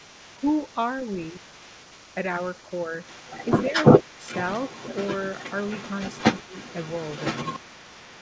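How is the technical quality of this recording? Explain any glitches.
The recording has two problems: a second voice sits under the speech for the whole clip, and the speech dips sharply three times where the two voices overlap. The sound stops at 8 kHz throughout, which fits a wideband call codec such as G.722.

Other side's voice leaking through runs from 0 to about 8 s, quite loud, only around 5 dB below the main speech. It is most likely residual echo: the far end's voice, played on the talker's loudspeaker, reached the microphone and the echo canceller failed to remove it. It differs from room reverb or a smeared tail of the main voice because it carries its own separate speech, running independently of the talker.

Speech suppressed in double talk occurs at 1.32 to 1.48 s, 4.02 to 4.12 s and 6.44 to 6.54 s. Each dip lasts about a tenth of a second. The first drops the level by roughly 10 dB, the second by roughly 20 dB and the third by about 15 dB. 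These are likely the echo canceller's suppression reacting to both sides talking at once and turning everything down, the talker included. The sound dips and recovers, and each dip coincides with the leaking voice.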